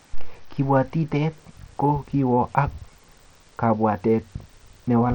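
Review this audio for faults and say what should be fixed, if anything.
Bluetooth SBC compression, likely the cause, runs throughout the speech. The treble flickers and drops away while gritty noise and aliasing sit on the sound. This fits a bitrate near 80 kbps starving the upper sub-bands of bits and coarsely quantising the rest. Recording over a wired connection, or raising the SBC bit pool or switching to a stronger codec, would prevent it.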